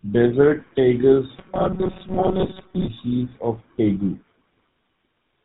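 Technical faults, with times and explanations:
Throughout: tandem speech coding, speech rougher and more warbly than one coder makes, fitting two GSM full-rate passes compounding errors, with nothing above 3.8 kHz.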